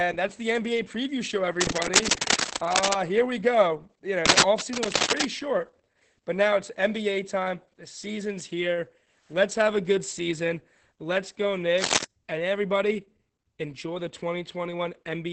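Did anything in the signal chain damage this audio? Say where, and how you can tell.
Yes. At the codec stage, Opus voice compression runs throughout this speech. The sound points to roughly 10 kbps in SILK mode at wideband, which cuts everything above 8 kHz and quantises the excitation coarsely. Coding damage is heavy, so the speech comes out muffled, hoarse and slightly robotic. On a spectrogram there is a hard ceiling at 8 kHz, with smeared, blocky harmonics that change in 20 ms frame steps.

In the analogue wiring, cable scratch noise appears from 1.57 to 2.94 s, 4.23 to 5.25 s and 11.77 to 12.04 s. It is dense, irregular rustling that sits about 5 dB above the speech. A worn cable or connector being moved is the likely cause, since its contact resistance jumps erratically. The waveform shows ragged, spiky bursts over the speech envelope, and the spectrogram shows broadband, patchy vertical smears in those spans.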